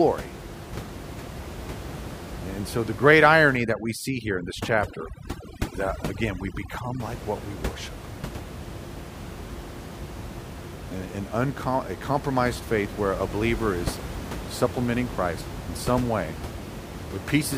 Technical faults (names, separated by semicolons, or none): overdone noise removal; damaged data in a compressed stream